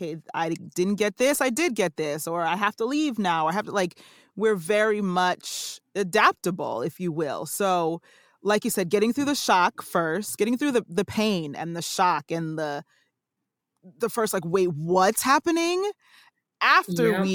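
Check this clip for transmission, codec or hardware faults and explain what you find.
No transmission, codec or hardware faults.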